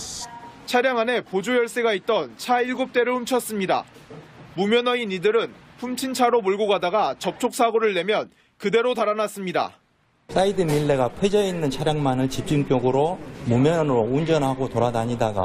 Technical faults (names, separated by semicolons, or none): none